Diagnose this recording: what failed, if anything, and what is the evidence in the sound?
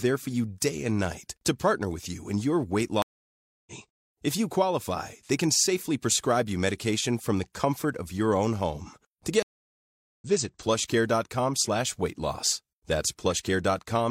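The speech drops to dead silence twice, from 3.02 to 3.73 s (about 0.64 s of silence) and from 9.43 to 10.25 s (about 0.77 s). Each time it picks up at a later point, skipping roughly 0.4 s and then roughly 0.7 s. This is a stream reconnect at the network stage. The connection broke, the player waited and reconnected, and a fresh decoder resumed from the live position, so the material sent during the outage never arrived.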